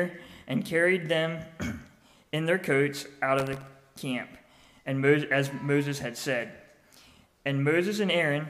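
From 3.39 to 3.77 s, a gritty, tearing crackle rides on top of the sound: processor overload crackle. The processor fell behind and missed around twenty buffer deadlines over that stretch. Each buffer was well under a millisecond long, and every miss repeated a scrap of old audio with hard edges. Unlike a single dropout, which leaves one clean gap, this is a dense cluster of tiny splices that stops abruptly once the load passes.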